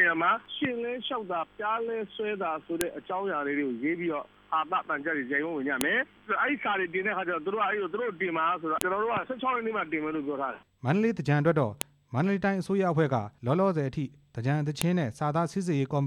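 At 2.81, 5.81, 8.81, 11.81 and 14.82 s a sharp, loud click snaps through the sound, each one instantaneous and unrelated to what the signal is doing. This is a file header played as audio: the stream was assembled from 3.0 s WAV pieces whose header bytes were left in place, so at every join those few dozen bytes are decoded as sample values. The regular three-second spacing marks each piece boundary.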